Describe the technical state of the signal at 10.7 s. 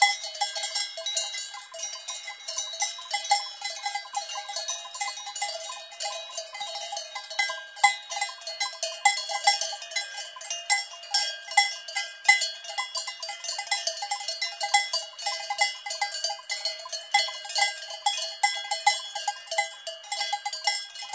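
At 10.7 s the audio is intact, with no dropout, glitch or distortion, only the steady top end of the call path's G.722 coding, which leaves nothing above 8 kHz.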